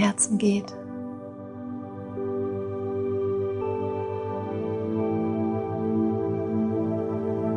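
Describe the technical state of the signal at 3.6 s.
At 3.6 s the signal is intact, with no audible fault at that point.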